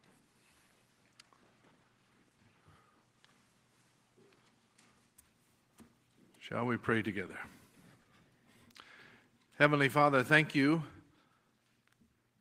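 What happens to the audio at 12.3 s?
A jitter buffer speed-up runs from 12.16 to 12.38 s: about 40 ms of pitch periods are cut, playing 114% fast at unchanged pitch, visibly compressed on the waveform.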